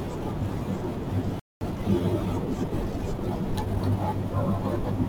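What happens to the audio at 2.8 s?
At 2.8 s the speech is in a stretch of time-compressed catch-up running from about 1.61 to 3.77 s. The player shortens its backlog by cutting out small slices and cross-fading the joins, so the speech runs about 1.1 times faster at unchanged pitch. A plain speed-up would raise the pitch as well.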